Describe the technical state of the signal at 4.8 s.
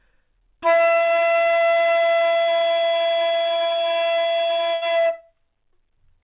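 At 4.8 s the audio is inside a burst of packet loss running from about 4.74 to 4.84 s. Roughly 80 ms of sound never arrived, and the receiver covered the hole by stretching the last received sound for about 75 ms while fading it down, so it is heard as a decaying held tone or hiss before playback jumps ahead. On a spectrogram the frames look repeated and smeared, dimming toward the gap's end, then cut abruptly, all below the 4 kHz ceiling of the narrowband call path.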